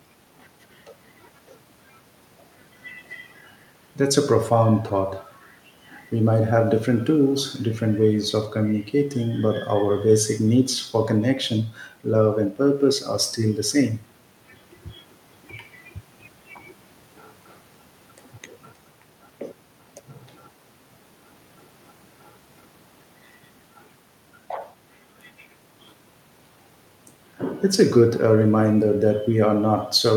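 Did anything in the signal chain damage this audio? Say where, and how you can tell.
No, nothing damaged this audio.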